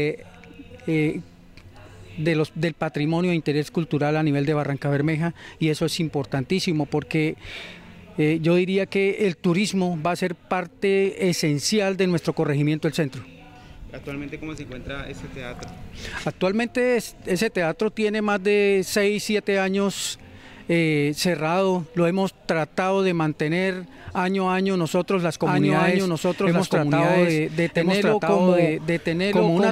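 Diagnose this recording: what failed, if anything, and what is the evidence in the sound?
From 25.43 s onward, an equally loud, dry copy trails about 1.5 s behind: a doubled audio track, likely from a slower second capture path.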